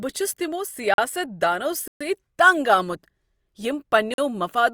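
At 0.94, 1.88 and 4.14 s the speech drops into blocks of digital silence, about 43, 128 and 43 ms long. Each hole cuts in and out with no fade, a sign of buffers not filled in time. The 43 ms ones fit a 2048-sample block.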